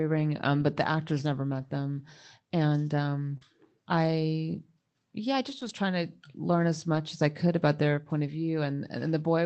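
Lost packets rebuilt from error correction first occur at 0.59 to 0.65 s. About 40 ms of speech, consistent with two lost 20 ms packets, was replaced by the lower-quality copy carried in the following packets, so there is no gap, only a brief rough, noisier patch. The same repair recurs at 3.41 to 3.43 s (about 20 ms), at 5.61 to 5.71 s just after "I yeah I just" (about 60 ms, roughly three packets' worth), and at 6.95 to 6.97 s (about 20 ms). None of these dulls the top end, since the call audio is limited to about 8 kHz and the copies keep that range.

Short concealed packet loss spans 3.37 to 3.43 s, right before "I yeah I just". About 40 ms arrived too late, and the receiver filled roughly 35 ms of it by extending the preceding sound before blending back into the real signal, heard as a brief smear or wobble. The tail of that hole overlaps the error-correction repair at 3.41 s.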